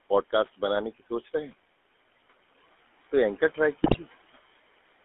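Throughout, the speech carries the GSM full-rate codec's signature: a buzzy, gravelly roughness on every voiced stretch, confined to a telephone band of roughly 250 Hz to 3.4 kHz. The coder rebuilds the voice from a vocal-tract filter driven by a sparse, regularly spaced pulse excitation, and at what sounds like about 13 kbps that thinned excitation becomes an audible grain. Plain band-limiting would only sound muffled. Here the harshness sits inside the voice itself.

Between 0.99 and 1.33 s, the speech is cut by the noise suppressor. Within that span, about a tenth of a second of sound is pulled down, by about 11 dB at the deepest point, so the affected sounds come out swallowed and faint. The suppressor mistook these quiet parts of the speech for background and lowered them along with it. A dropout would go silent or click. This is a smooth dip, and the room noise, about 22 dB below the speech, is turned down with it.

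From 3.84 to 3.98 s, GSM bit errors break the voice into a brief gargling squawk. Corrupted values reached the decoder, so the filter, pitch or gain parameters are wrong for a short run of frames, which fits about six 20 ms frames being hit. The codec's steady roughness never changes, but this burst distorts the spectrum and jolts the level abruptly, then clears.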